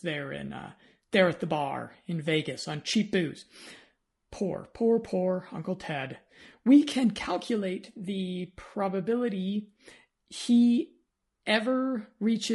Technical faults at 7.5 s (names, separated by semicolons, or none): low-delay AAC compression